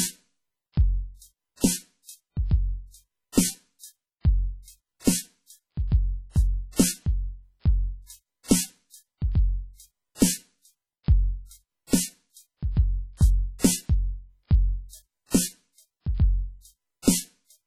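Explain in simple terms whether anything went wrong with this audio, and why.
Throughout, the music rings and smears under heavy, washy hiss that breathes with it, with nothing above 16.9 kHz. This is likely WMA compression discarding detail.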